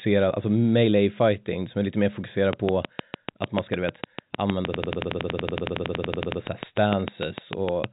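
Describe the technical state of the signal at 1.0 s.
At 1.0 s the audio is intact, with no fault present; it carries the band-limited sound of G.711 telephone coding, with nothing above about 3.8 kHz.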